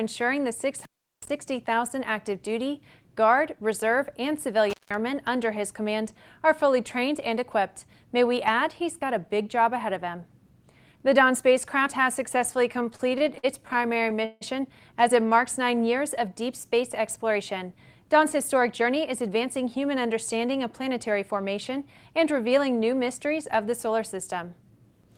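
Intermittent contact cuts the sound twice, at 0.79 to 1.29 s with the line open for about 370 ms, and at 4.70 to 4.94 s for about 170 ms. A loose plug or cable briefly breaking the circuit is the cause. Unlike a clean digital dropout, each cut has crackle at its edges and faint hiss underneath. From 12.79 to 14.43 s there are repeated stalls (stutter). The receiver's jitter buffer ran dry twenty times and held the last sound each time, filling 416 ms in all, with the longest wait 158 ms. Nothing is skipped, which separates it from packet loss. The audio drags and hiccups instead of losing pieces. Jitter buffer speed-up follows at 16.73 to 17.63 s, 18.14 to 19.44 s and 23.98 to 24.63 s. In each stretch short pitch-period slices were trimmed to shed backlog, roughly 50, 70 and 50 ms, so the sound runs about 5 to 6 percent fast and feels hurried. Pitch stays unchanged, which distinguishes it from a sample-rate mismatch.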